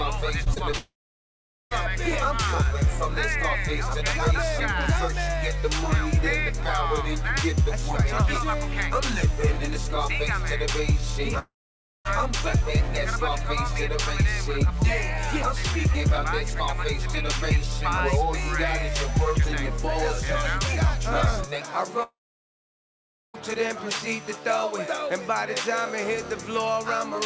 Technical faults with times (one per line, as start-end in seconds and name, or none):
0.44-0.75 repeated packet loss (robotic sound)
0.77-1.73 long network dropout
11.39-12.07 long network dropout
22.03-23.36 long network dropout